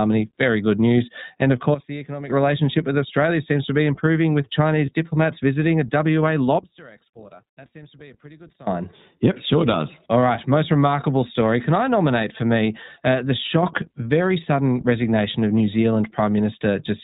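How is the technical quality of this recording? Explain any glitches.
The recording has clear technical problems: narrowband codec coloration throughout, three abrupt level steps, and one brief dropout.

The whole speech clip carries iLBC codec damage. Nothing above 4 kHz survives, and voices sound plainly rough and slightly synthetic. The character fits iLBC's 20 ms, 15.2 kbps mode, where each frame's excitation is coded independently. Unlike general band-limiting, the roughness itself is the giveaway.

Three sudden gain jumps occur. Level drops by about 12 dB from 1.74 to 2.30 s, by about 24 dB from 6.59 to 8.67 s, and rises by about 6 dB from 13.63 to 13.87 s. Each step is instant, speech and background noise shifting together, likely from a gain setting applied without a ramp. A fade would instead glide.

Lost iLBC frames appear at 4.86 to 4.89 s, where one 20 ms frame drops out. The decoder fills the gap by repeating the last pitch cycle with noise, giving a short buzzy, held-vowel sound. 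Normal speech resumes immediately, which distinguishes it from a level dip.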